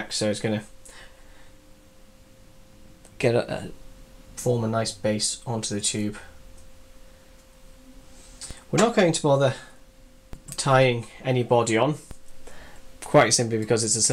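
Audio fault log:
8.51 s, 10.33 s, 12.11 s: DC step. The waveform's zero line jumps by about -24 dBFS each time. A 20 Hz high-pass then pulls it back to centre. The sudden shift is heard as a low thump, while the sound carries on unchanged.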